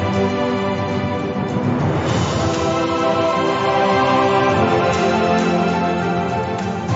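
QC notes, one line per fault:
Nothing to flag here, as no faults turn up anywhere in this clip.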